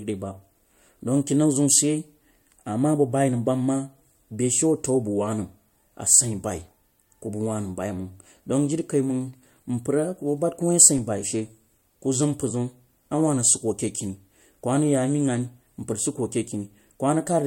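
DC step at 10.98 s: the waveform's zero line jumps suddenly, giving a low thump while the speech continues, then the offset decays through a 20 Hz high-pass.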